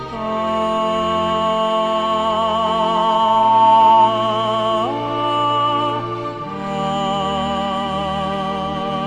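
Loudspeaker feedback squeal runs from 1.66 to 4.15 s. A microphone is picking up its own loudspeaker, and at 899 Hz the loop gain tops one. That lone tone swells over roughly two seconds until it sits about 10 dB above the sound.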